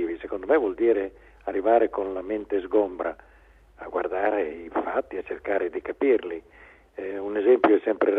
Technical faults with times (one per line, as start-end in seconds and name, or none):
none